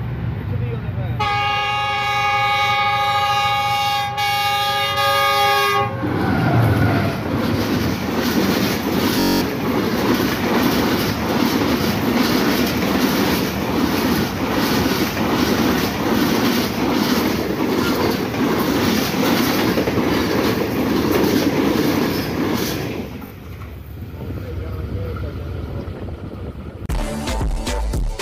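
Bluetooth stutter hits at 9.2 s and 23.27 s. Missing packets make the receiver repeat a short slice, buzzing for 0.21 s and 0.04 s before the audio jumps ahead.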